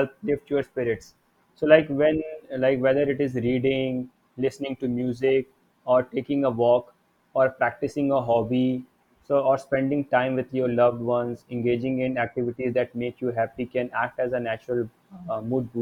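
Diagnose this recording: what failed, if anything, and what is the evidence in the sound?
Nothing in the signal points to a failure at any stage of the chain.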